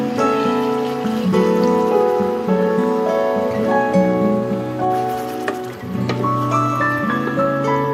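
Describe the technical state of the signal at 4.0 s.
At 4.0 s the signal is intact, with no audible fault at that moment.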